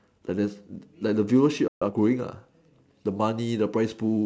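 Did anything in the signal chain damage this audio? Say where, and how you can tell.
Yes. At 1.68 s the speech simply drops out for about 134 ms, then resumes at 1.82 s, a playback stall. That's at the playback buffer stage: the player likely ran dry or had its thread blocked, so nothing reached the output until it recovered.

Right after, from 1.82 to 1.94 s, the speech rushes along at roughly 2x speed with no pitch shift. That's time-compressed catch-up: the player trims its backlog by splicing out short chunks and cross-fading the joins.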